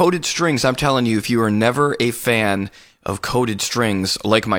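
No technical faults can be heard anywhere in this speech recording. The sound runs continuously, with nothing that interrupts or alters it at any point.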